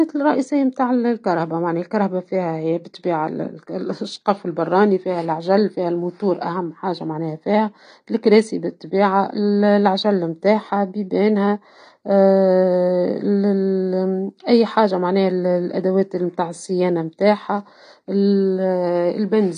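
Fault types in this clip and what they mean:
AAC compression: The speech sounds dull and smeared from start to finish, with a warbling, fizzy texture on sustained sounds and sibilants, and nothing is heard above about 9.6 kHz. This plainly audible damage is likely from AAC-LC coding at a low bitrate, which fits around 32 kbps. At that rate the encoder drops the top of the spectrum and quantises the remaining frequency lines so coarsely against its hearing model that gaps and swirling artefacts appear.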